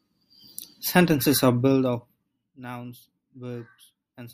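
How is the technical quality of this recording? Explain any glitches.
The recording has one clear glitch: zipper noise during a level drop. From 1.58 to 2.60 s the level falls by around 15 dB, not as a smooth fade but in 2 dB jumps at about ten steps a second, with no smoothing between them. Each jump is a small discontinuity that clicks, so a faint ticking rides on the speech while the level sinks. On a waveform the envelope descends as a staircase; a spectrogram shows thin vertical broadband lines at each step.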